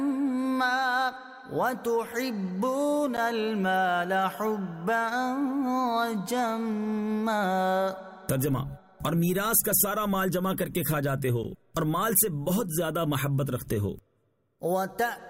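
A block of digital silence appears at 3.17 s and again at 11.44 s. Each time, about 10.7 ms of audio cuts out and returns with no fade, which fits a 512-sample buffer not being filled in time. Both gaps are heard as brief ticks.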